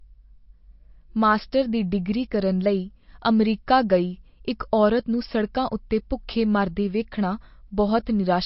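Heavy MP3 compression is the likely cause of the damage running through the whole speech clip. Starved of bits, which fits a very low rate of around 32 kbps, the encoder discards everything above 5.6 kHz and drops weaker frequency lines that then flicker in and out between frames. The result is plainly audible: dull, band-limited speech with a watery, swirling texture, metallic chirping on s sounds, and softened, smeared consonant attacks.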